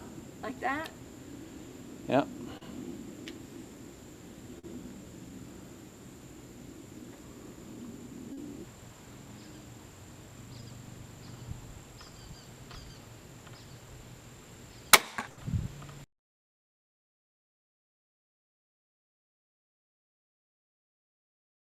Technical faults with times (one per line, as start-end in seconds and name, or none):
2.57-2.63 short concealed packet loss
4.59-4.65 short concealed packet loss
8.33-8.39 short concealed packet loss
10.61-10.64 short concealed packet loss
12.72-12.75 short concealed packet loss
15.29-15.39 burst of packet loss